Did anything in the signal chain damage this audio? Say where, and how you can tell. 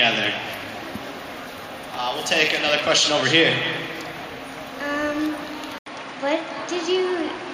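Yes. At 5.78 s the audio drops out for about 80 ms, and from there to the end nothing comes through above 9.8 kHz, so the top goes dull and a new noise floor appears, roughly 35 dB under the signal, with the level staying about the same. That looks like an input switched to a poorer device, most likely at the driver level, with the system handing capture over to a narrower-band microphone mid-recording.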